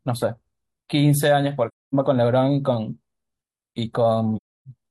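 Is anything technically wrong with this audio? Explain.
Yes. The speech has two dropouts from AAC frame loss with muting. From 1.68 to 1.94 s the sound fades to silence for about 256 ms, which fits six consecutive frames. From 4.37 to 4.68 s about 299 ms is lost, spread over 341 ms with the longest gap around 300 ms. The decoder zeroes the missing frames' spectrum, and the overlapping windows ramp the level down and back up, so each hole has soft edges.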